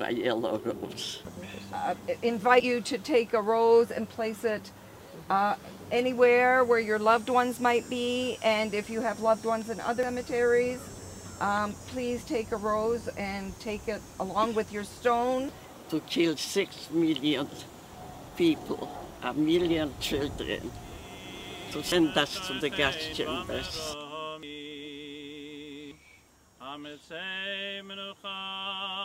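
The sound jumps ahead at 2.60, 10.03, 21.92, 24.43 and 25.91 s, with no gap of silence, just a sudden splice where a chunk has gone missing. The lost pieces run from roughly a tenth of a second up to about three tenths, the longest at 24.43 s. That pattern likely points to a dropped buffer (overrun): the capture side didn't read its samples in time, the hardware wrote over them, and the two ends got butted together.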